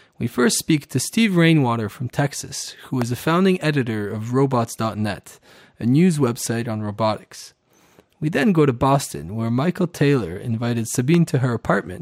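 A loud pop occurs at 3.02 s and again at 11.14 s: each a single sharp click, around 10 dB above the surrounding sound, which continues underneath. The likely cause is a brief voltage pulse from a plug, switch, static discharge or driver glitch.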